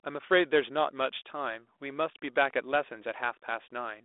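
Speech, with no technical faults to be heard.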